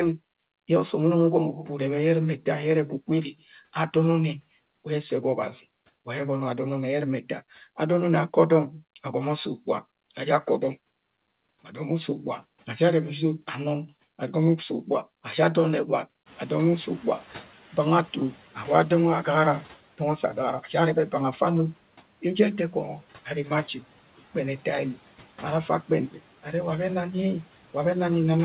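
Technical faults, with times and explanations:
16.26 to 18.44 s, noise suppressor catching up: The room noise jumps by about 18 dB at around 16.5 s. The suppressor's noise estimate lags behind, so the new noise passes with little reduction at first. Over the next 2.18 s the estimate adapts and the noise sinks by about 7 dB. It then sits about 23 dB below the speech. The band-limited sound, with nothing above 4 kHz, fits a G.711 call path.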